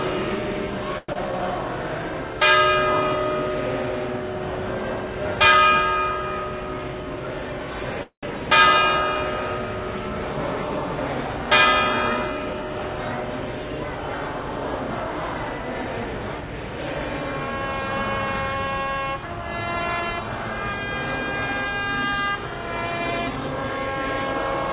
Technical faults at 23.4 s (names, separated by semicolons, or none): jitter buffer speed-up